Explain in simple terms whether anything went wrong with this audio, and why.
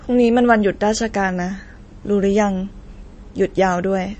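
Yes, something went wrong. The whole speech clip sounds watery and dull, with smeared consonants and no treble above about 8.3 kHz. This is likely MP3 compression at a low setting. The encoder cut the top end and dropped quiet detail.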